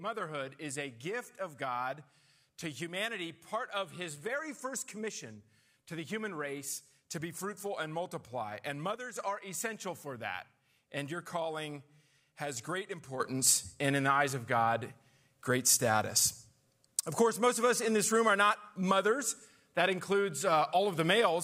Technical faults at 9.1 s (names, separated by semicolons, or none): sudden gain jump